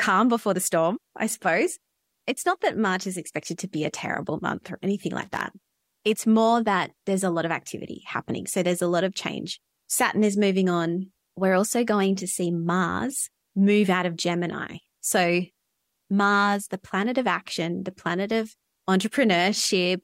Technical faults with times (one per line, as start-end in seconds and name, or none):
5.22-5.41 loose connector crackle